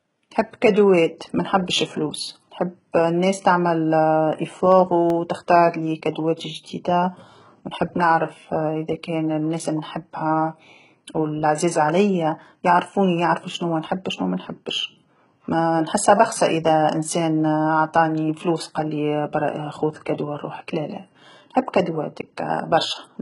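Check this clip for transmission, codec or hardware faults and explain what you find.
Three faults are audible: band-replicated treble throughout, a short run of ticks, and one smeared attack.

HE-AAC compression, throughout: the sibilants sound gritty and metallic, and nothing reaches above about 11.1 kHz. The likely cause is spectral band replication, which copies lower bands upward under a coarse envelope. That fits a very low bitrate around 12 kbps, where harmonics fail to align across the crossover.

CD scratch ticks, 4.72 to 5.10 s: three brief ticks, each under a millisecond. A blemish wiped out more data than error correction could rebuild on successive turns of the disc, so the player patched or muted those samples.

Pre-echo, 6.36 to 6.39 s: about 32 ms of hiss runs ahead of a sharp attack, which sounds softened. The codec spread quantisation noise across its whole block, so noise scaled for the loud onset spilled into the quiet moment just before it.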